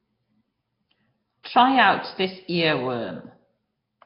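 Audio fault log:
throughout, Nellymoser compression: the speech carries a rough, hissy halo and a smeared, underwater colour, with nothing above 5.3 kHz. The heavy damage likely comes from the Nellymoser Asao codec at a low rate near 22 kbps, whose fixed two bits per sample leave weak bands empty and fill them with noise. That noise-filling separates it from a plain low-pass or the swirly artefacts of MP3.
1.43 s, pre-echo: about 18 ms of hiss runs straight into a sharp onset and blunts it. Noise scaled for the loud attack is spread across the whole transform block, so it spills into the quiet moment before. Unlike a click or reverb, the smear comes before the sound, not after it.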